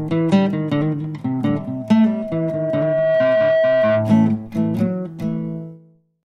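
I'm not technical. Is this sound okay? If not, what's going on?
No. There is loudspeaker feedback squeal from 1.54 to 4.36 seconds. A microphone is picking up the loudspeaker it feeds, so the sound keeps looping back and getting louder each time. Here the loop locks onto one tone at 644 Hz, a steady mid-pitched whine. It swells over about a second and a half until it is louder than the rest of the sound, then stops at 4.36 seconds.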